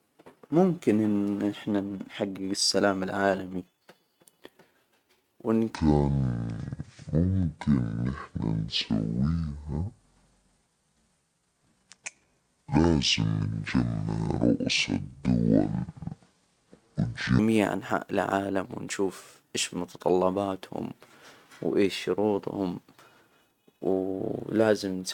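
From 5.75 to 17.39 s, just before "أنحاء العالم ونشوف إيش", the speech turns deep and dragging: a section at the wrong speed, at 0.56x and about ten semitones low, likely from a wrong playback clock.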